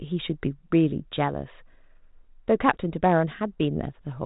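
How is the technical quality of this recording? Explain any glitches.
No glitches are audible; the speech runs over a 32 kbit/s G.726 telephone path with nothing above 3.8 kHz and only light coding grain.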